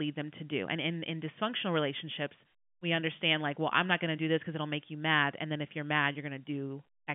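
No technical faults can be heard in the speech. It carries the narrow band of G.711 telephone coding, running from about 150 Hz to 3.4 kHz with nothing audible above 3.6 kHz.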